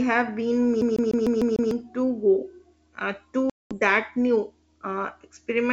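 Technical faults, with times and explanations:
0.82–1.71 s, CD stuck on one turn: a 150 ms slice repeats six times with a short mute at each jump, as a scratch knocks the laser back one track every revolution.
3.50–3.74 s, packet loss on an ADPCM call: a hard-edged gap of about 0.21 s, fitting around twenty lost packets, leaves the decoder's adaptive predictor and step size out of step with the sender's until they re-converge.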